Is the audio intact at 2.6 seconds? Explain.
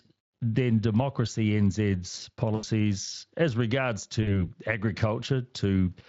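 No. VoIP packet loss concealed by the speech codec runs from 2.55 to 2.65 s: the decoder stretches the last sound over about 80 ms into a fading buzzy tone or coloured noise, not a silent dropout.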